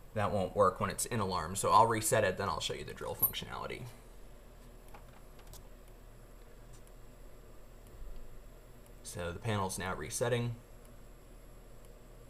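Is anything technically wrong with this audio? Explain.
No, nothing technically wrong can be heard here.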